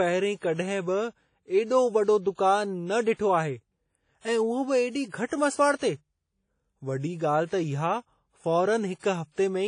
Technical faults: WMA compression

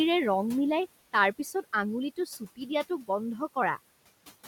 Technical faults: noise suppressor artifacts; speech cut by the noise suppressor

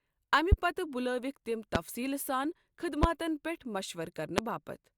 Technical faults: loud pop

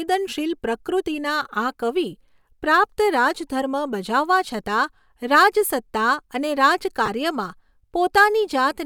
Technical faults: lost LE Audio frames

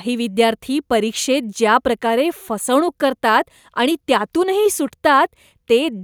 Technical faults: none

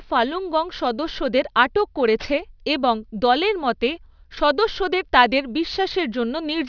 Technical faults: aliasing

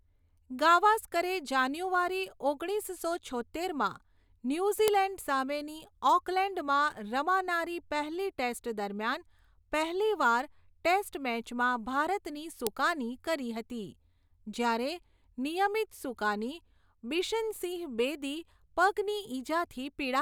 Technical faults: file header played as audio

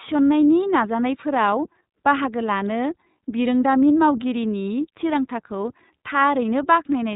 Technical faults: iLBC codec

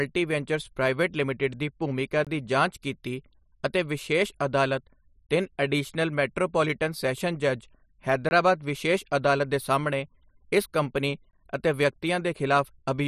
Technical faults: gap between chunks

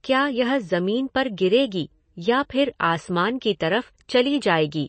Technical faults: MP3 compression

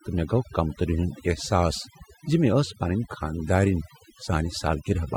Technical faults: overdone noise removal

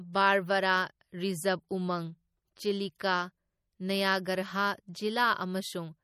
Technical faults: MP3 compression

